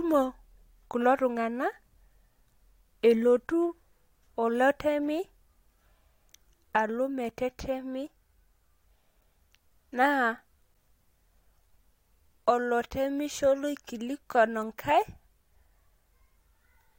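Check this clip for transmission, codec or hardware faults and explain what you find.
No transmission, codec or hardware faults found.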